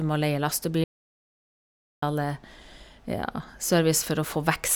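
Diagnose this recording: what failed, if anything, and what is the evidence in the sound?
Audio dropout to silence from 0.84 to 2.02 s, right after "må leie": the speech cuts off mid-flow into dead digital silence with no room tone, then resumes, losing about 1.18 s. This likely points to the input stage, a lost device or link while zeros kept being written.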